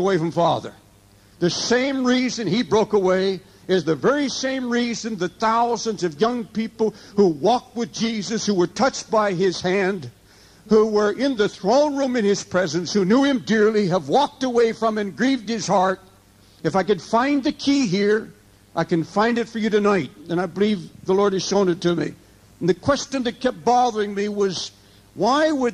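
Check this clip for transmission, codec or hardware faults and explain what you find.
Nothing wrong can be heard anywhere in this audio.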